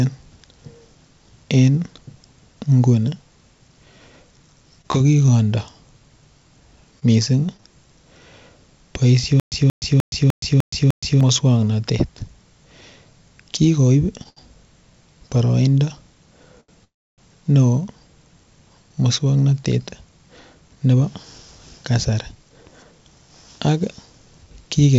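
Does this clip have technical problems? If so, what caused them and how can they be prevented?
Yes. This speech clip has a series of network and playback faults.

From 4.82 to 5.29 s there is repeated packet loss, heard as a robotic sound. Three holes in quick succession are patched by extending the preceding sound, giving a choppy texture. About 40 ms of audio is missing, the longest gap lasting 24 ms, and concealment covers about 11% of that stretch. Better link quality or forward error correction with redundancy would prevent this.

From 7.00 to 7.60 s there are scattered short gaps: a few isolated lost packets, each with a short patch of roughly 15 ms or less. About 60 ms of audio is lost in total, and the result is brief ticks and smears rather than sustained distortion. Packet-loss resilience such as FEC or retransmission on a cleaner connection would prevent it.

From 9.40 to 11.21 s there is a stutter with silent gaps. 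A 181 ms fragment repeats six times, every 301 ms, with about 120 ms of digital silence between repeats. The likely cause is the stream stalling and replaying its last buffered fragment on each retry, and the audio due in that time is lost. Ensuring the source delivers data steadily, with adequate playout buffering, would prevent it.

At 14.23 s, from 14.29 to 14.38 s, and from 16.60 to 16.70 s there are short stalls from late packets. Each packet arrived after its due time, so the receiver held the last sound for 17, 74 and 79 ms, then resumed where it left off. Nothing is missing, but those sounds are held too long. A jitter buffer sized for the network's actual delay variation would prevent them.

From 16.84 to 17.20 s there is a call audio freeze. The last sound is stretched and decays, then 290 ms of silence follows before the audio continues from the same point. About 335 ms of delay is inserted and nothing is lost. 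A long delivery delay that emptied the jitter buffer is the likely cause. Reducing congestion on the path would prevent it.

From 18.89 to 22.99 s there is a jitter buffer speed-up. The buffer had built up excess audio, so the receiver trimmed short pitch-period segments repeatedly, roughly 300 ms in all. The speech runs at about 108% speed at unchanged pitch and sounds hurried. Steadier packet delivery, so that delayed packets do not arrive in bursts, would prevent this.

The G.722 call path at 64 kbps contributes a high-frequency cutoff at 8 kHz.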